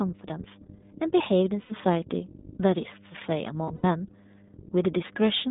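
Speech recorded with a steady 50 Hz mains hum underneath, roughly 20 dB below the speech, from a ground loop or nearby transformer feeding power-line current into the signal. The whole clip has passed through the iLBC codec: the band stops at about 150 Hz and 3.7 kHz, and the voice has a plainly rough, synthetic edge, consistent with iLBC's 15.2 kbps mode and its 20 ms frames. Lost iLBC frames occur from 1.62 to 1.72 s, about 80 ms concealed, and from 3.64 to 3.85 s, about 140 ms of concealment across 200 ms with runs up to roughly 70 ms. In each gap the decoder fills in with a held, buzzy vowel, and the voice recovers almost immediately afterward.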